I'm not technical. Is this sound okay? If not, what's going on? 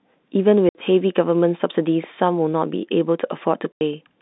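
No. Two short gaps of dead silence cut into the speech at about 0.69 s and 3.72 s, lasting roughly 60 and 90 ms. That's packet loss filled with silence: bits of audio went missing in transit, and the gaps fit 30 ms chunks. The gaps have abrupt edges, over the familiar narrow phone-line sound.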